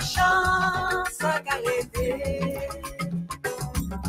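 From the start, a noise suppressor applied to music or sounds is at work. A speech-oriented suppressor keeps mistaking sustained tones and tails for noise, so the level swings by roughly 10 dB. Unlike a simple gate, it pumps and thins held sound while attacks pass intact. At 2.62 to 2.99 s, sound is cut by the noise suppressor, dipping by up to about 7 dB for around a third of a second. At 3.28 to 3.44 s it sinks deeper, about 14 dB. These are partial dips in level, not the hard silence of a dropout.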